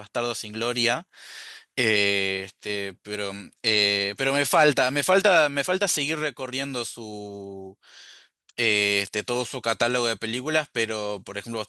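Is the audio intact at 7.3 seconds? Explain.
Yes, the speech at 7.3 seconds plays through intact, with no dropout, click, distortion or other fault at that point.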